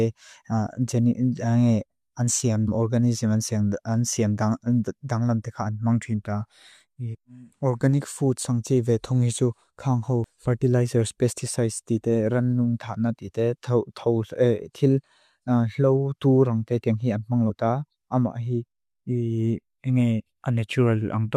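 Damaged data in the compressed stream of this speech recording makes the decoder misread or drop frames and lose sync while it searches for the next frame header. It is heard as brief chirps or blips at 2.67 s after "an siam", at 10.24 s between "tunghi tsu kang ho" and "fertilizers pesticides", and at 17.49 s.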